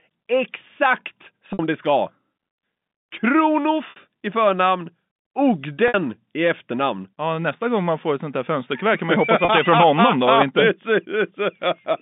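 At 1.53, 3.90 and 5.88 s, then 9.45 s, there's packet loss with pitch repetition: roughly 60 ms gaps (30 ms at the last, which fits one lost packet) bridged by a repeated pitch period that sounds like a brief buzzy hold, over the telephone-band G.711 line.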